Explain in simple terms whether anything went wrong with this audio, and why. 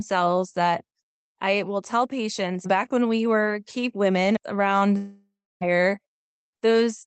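Something goes wrong at 4.97 seconds, right after "were keep women around." The sound breaks off and is replaced by a fading buzz. Then about 0.3 seconds of near silence follow. Normal sound returns at 5.63 seconds. Roughly 0.64 seconds of the original speech is simply gone. This is most likely a long network dropout. No audio reached the listener, so the call software stretched the last sound and then gave up. It comes through a call codec that trims everything above about 8 kHz.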